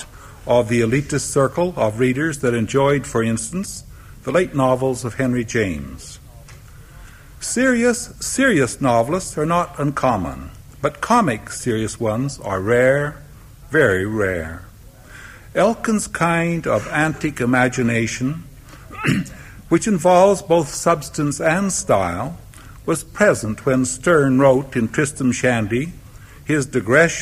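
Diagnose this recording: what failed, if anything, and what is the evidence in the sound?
Nothing failed, and there is no evidence in the sound of any fault at any stage.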